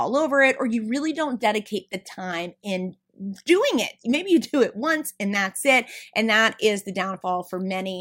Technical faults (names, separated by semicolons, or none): none